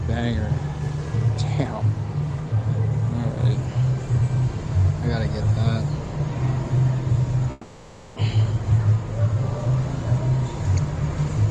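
From 7.51 to 8.18 s the sound smears into a fading buzz for about 660 ms with no real silence, and when it resumes roughly half a second of material is simply gone. That's likely a long network dropout, with the receiver papering over the gap.

Right after, from 8.28 to 9.76 s, the jitter buffer speed-up kicks in: the audio plays about 9% fast at the same pitch, sounding hurried, as tiny pitch-period chunks get trimmed to claw back around 150 ms of built-up delay.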